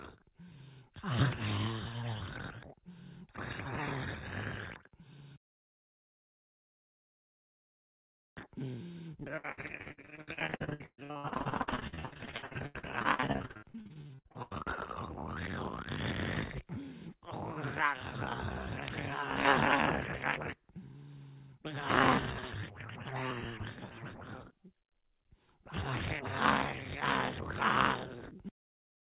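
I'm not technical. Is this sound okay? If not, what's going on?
No. From 9.36 to 14.62 s there is repeated packet loss (robotic sound): dozens of chunks of audio went missing in transit, each up to 120 ms, and the system patched each hole by stretching the last bit heard. About half of that stretch is patched, so it sounds choppy and robotic.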